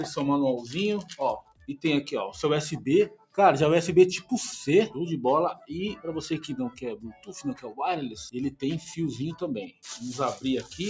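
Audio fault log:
Throughout: noise suppressor applied to music or sounds. A suppressor tuned for speech stays active on the whole clip. It treats steady tones, ambience and decays as noise and keeps pulling them down. Sudden onsets slip through before it reacts, but sustained parts sink soon after. The level swings by around 10 dB as it works, so the sound pumps and thins. The call path passes nothing above 8 kHz, so the top end is also limited.
1.39–1.69 s, 3.09–3.38 s, 5.54–5.69 s, 6.71–7.30 s, 9.67–9.85 s: sound cut by the noise suppressor. In each stretch the suppressor judges the sound to be noise and cuts it harder than the rest. The deepest drops are about 18 dB, 19 dB, 14 dB, 11 dB and 18 dB in that order. Each lasts from about 150 to 500 ms. Held or fading parts dip sharply or have their tails clipped short.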